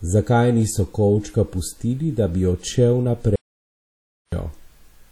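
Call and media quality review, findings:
WMA compression, whole clip: likely a transform codec run at low bitrate, consistent with about 48 kbps. Coarse quantisation spreads noise across long blocks and zeroes weak spectral lines, giving plainly audible ringing, washy smearing and hiss that breathes with the speech. No content above 19.6 kHz.

Audio dropout to silence, 3.36 to 4.32 s: input likely lost upstream, through a device disconnect, link failure or mute, while recording continued writing silence. About 0.97 s of speech is gone, replaced by dead silence with no room tone.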